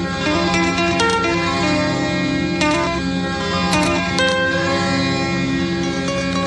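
Music, no audible technical faults.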